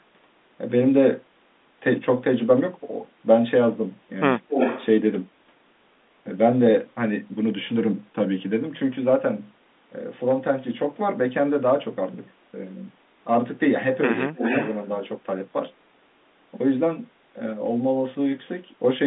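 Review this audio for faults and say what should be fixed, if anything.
Speech suppressed in double talk: from 4.46 to 4.55 s the level dips by roughly 15 dB for about a tenth of a second, likely because the echo canceller mistook overlapping talk for loudspeaker echo and attenuated everything. Unlike a packet dropout, the sound ducks rather than vanishing. A canceller with better double-talk detection, or a headset on the far end, would prevent it.

Echo leak: a delayed copy of the speech returns from 4.51 to 4.86 s, 273 ms late and about as loud as the original, and from 14.37 to 14.76 s, 296 ms late and about 5 dB quieter. This is likely a loudspeaker's echo slipping past its canceller. Unlike room reverberation, it is a distinct repeat arriving roughly 0.3 s later, not a smear. Tighter echo cancellation on the loudspeaker side, or headphones, would stop it.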